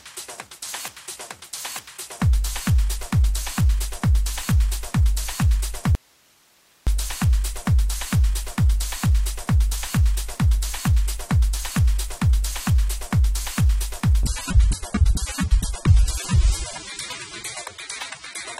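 From 5.95 to 6.87 s the sound cuts out for about 0.92 s, leaving faint hiss far below normal level. This is likely an audio dropout to a faint residue with the path still live. At 14.23 s quality drops suddenly until the end, with no gap. Nothing remains above 13.3 kHz and codec artefacts rise, consistent with an adaptive stream switching to a lower bitrate, around 96 down to 24 kbit/s.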